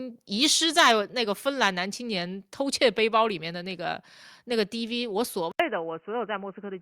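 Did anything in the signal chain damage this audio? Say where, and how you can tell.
Yes. The first damage is at the converter, where the microphone input gain was likely set too high so peaks ran past full scale. From 0.78 to 0.91 s the signal overshoots by about 5 dB, and again from 1.62 to 1.67 s by about 3 dB. The tops of those waveforms are sliced flat on a few percent of samples, and that squaring-off adds a harsh, crackling edge to the loudest syllables.

Next comes call processing. At 1.02 s the microphone volume is stepped down by about 2 dB in a single move, likely the software's automatic gain control reacting to the overload just before it. Because the cut is applied to the whole input at once, the voice and the background fall together, with no gradual ramp. That simultaneous, abrupt drop is what identifies a level change rather than the talker getting quieter.

Finally, at the driver or device level, the input is likely switched to a poorer device at 5.52 s and stays that way to the end. 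An 80 ms gap of silence marks the changeover. Afterwards the band is narrower, so the voice turns dull and boxy, and a new noise floor roughly 45 dB below the signal appears. The overall level stays about the same, so the change is heard as tone and noise rather than loudness.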